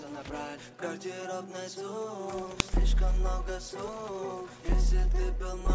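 At 2.60 s there is a single sharp, loud click. It is a file header played as audio. A second piece of the recording was joined on here without its WAV header being stripped. Those few dozen bytes of file information were read as if they were sound samples. The result is a brief burst that lasts about a millisecond. It snaps out regardless of what the surrounding audio is doing, marking the exact seam between the two pieces.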